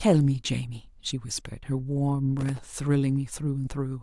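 From 2.39 to 2.67 s the speech carries processor overload crackle: very short buffers of around 1.5 ms miss their deadlines repeatedly, each leaving a hard-edged silent gap. It sounds like gritty tearing, unlike a single clean dropout, because roughly fifteen tiny gaps cluster together.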